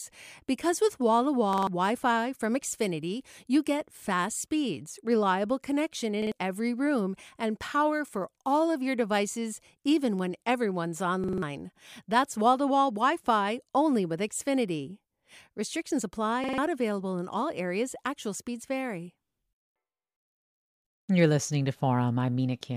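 Speech, with a repeated buffer stutter in four places: 1.53–1.67 s, 6.22–6.32 s right after "fast speeds reliable connection", 11.24–11.42 s after "devices even when everyone's", and 16.44–16.58 s just before "available in all areas". Each time, one slice of about 46 ms plays two to four extra times with a hard join at every repeat. That points to fresh audio arriving late and the device replaying a 2048-sample buffer, dropping roughly 100 to 200 ms of speech each time.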